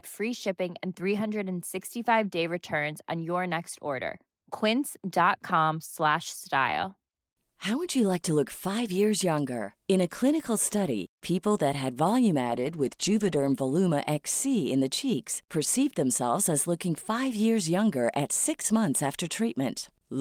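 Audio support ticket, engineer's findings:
Speech turns rough and muffled 12.42 to 13.61 s, worst for about 1.1 s, then clears. Call bitrate drop: the bandwidth estimate fell and the encoder coded far more coarsely, which fits a fall from 32 to 13 kbps.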